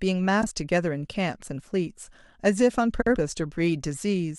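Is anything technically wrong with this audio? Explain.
Yes, there are two spots with frames out of order, at 0.41 to 0.47 s and again at 3.01 to 3.16 s. In each, two neighbouring runs of four frames got decoded swapped (blocks of about 42 ms and 93 ms), so the halves play exchanged. You hear a garbled flutter, and no time is lost.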